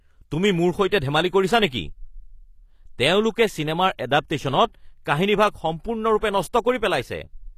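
Throughout the speech, the treble is wrong. Sibilants come out gritty and metallic, and the upper harmonics do not sit in line with the lower ones. Nothing is present above 14.9 kHz. This points to HE-AAC compression, with the codec damage plainly audible, which fits a low bitrate around 24 kbps. The likely cause is spectral band replication: the encoder keeps only the lower band and synthesises the treble by copying lower content upward under a coarse envelope.

At 0.89 to 0.92 s, a brief hiss of about 29 ms leads into a sharp attack, and the attack itself sounds softened. This is pre-echo. The transform block spread its quantisation noise evenly across its length, so the noise budget set by the loud onset also filled the quiet gap before it. A second, shorter instance at 5.05 s spans about 13 ms and gives a short hiss just ahead of the transient.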